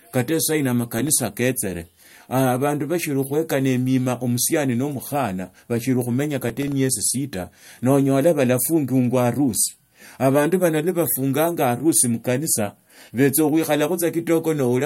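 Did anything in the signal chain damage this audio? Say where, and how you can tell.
Yes. A brief gritty crackle tears through the speech at 0.99–1.21 s, after "kata sahino", and at 6.49–6.72 s, before "sita noonyala". This is processor overload crackle in the driver or buffer stage: several tiny buffers, around 1.5 ms each, missed their deadlines and dropped out as hard-edged silent gaps.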